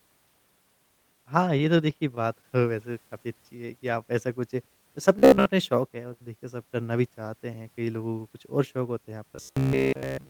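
Between 1.45 and 2.51 s there are scattered short gaps: about seven small holes, roughly 70 ms in all and none longer than about 15 ms, each bridged by extending the preceding sound. Unlike the robotic passages, clean audio resumes between these isolated ticks and smears.

From 3.08 to 3.80 s a jitter buffer slow-down stretches the audio by 55 ms, to 93% speed. Repeated pitch periods or pause fragments drag it out while the pitch stays put, so it sounds slowed rather than gapped or buzzy.

At 5.19 to 5.49 s and again from 9.36 s to the end at 10.30 s, the sound turns into a rigid, metallic robotic buzz at 66.8 Hz, with most of the stretch made of repeats. The likely cause is repeated short buffers of about 15 ms standing in for skipped audio. This steady buzz sets it apart from the brief scattered gaps.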